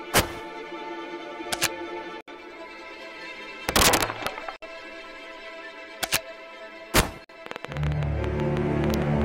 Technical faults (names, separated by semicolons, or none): integer overflow; gap at a join of encoded pieces; train of clicks